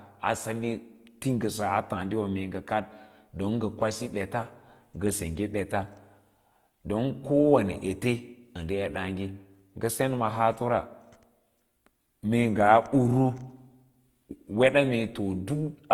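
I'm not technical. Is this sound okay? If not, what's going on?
No. Opus compression runs through the whole clip, likely from heavy data-saving. The encoder rebuilds detail it couldn't afford by copying lower sounds upward or filling in noise, so the speech comes out noticeably grainy and rough, though the treble still reaches high.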